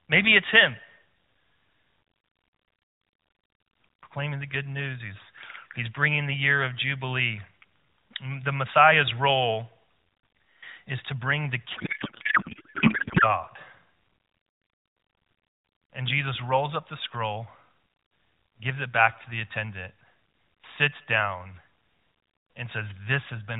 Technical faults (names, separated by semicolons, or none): codec payload misread